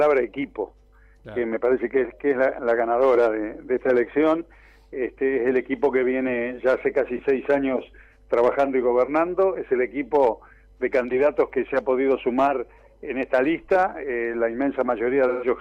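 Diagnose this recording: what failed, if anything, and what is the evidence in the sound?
Two things went wrong. For the first 1.3 s, from 0.00 to 1.30 s, there's a steady buzz at 46.9 Hz. That's a block size mismatch (truncated) in the driver or buffer stage. One stage writes longer blocks than the next reads, and each block's tail gets chopped. The buzz rate fits 1024-sample blocks, and timing stays at 1.0x.

Near the end, from 15.28 to 15.47 s, about 128 ms of audio turns into a short smeared, noisy patch. That's AAC frame loss with concealment at the codec. The decoder patched the gap from the last good spectrum, which fits roughly three lost frames.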